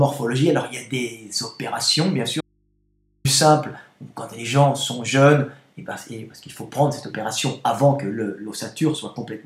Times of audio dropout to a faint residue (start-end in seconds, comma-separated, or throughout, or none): 2.41-3.25